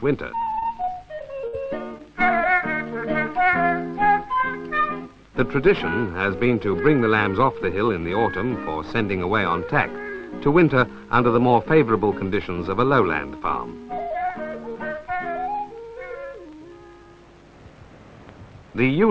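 From 0.6 to 1.59 s, repeated packet loss: six gaps up to 58 ms, patched by extending audio, giving robotic choppiness rather than one dropout.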